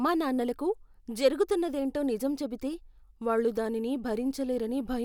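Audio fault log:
Nothing to flag here, since the speech comes through without any fault to log.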